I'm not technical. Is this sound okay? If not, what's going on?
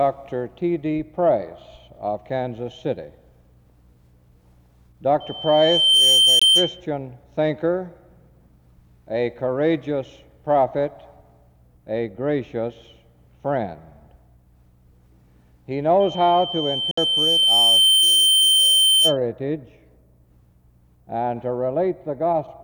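No. Twice a high whistle, near 3.1 kHz, swells up and takes over: from 5.20 to 6.81 s, rising within about a second, and from 16.0 to 19.17 s, building more slowly over about two seconds. This is loudspeaker feedback squeal. A microphone hears its own loudspeaker, and the sound keeps looping round and growing.

The sound also cuts out briefly. There is a tiny gap at 6.39 s, about 20 milliseconds long, and a longer one at 16.91 s, about 60 milliseconds. Afterwards it carries on as if it had kept playing. A Bluetooth dropout is the likely cause. Some wireless audio arrived too late and was skipped.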